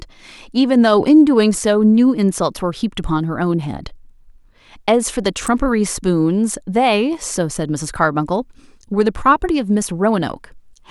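A speech recording carrying one electrical switching spike at 5.47 s: a sharp snap lasting about 12 milliseconds and peaking fairly high, around -10 dBFS. The likely cause is a nearby switch, motor or static discharge arcing and coupling into the audio line. It differs from a digital dropout click because the speech carries on underneath without a gap, and unlike a handling bump it has no low-frequency thump, only a brief, bright crack added on top.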